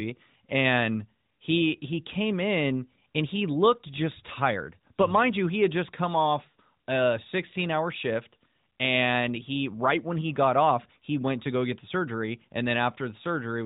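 Nothing goes wrong anywhere in this speech recording, so there's no fault to point to at any moment.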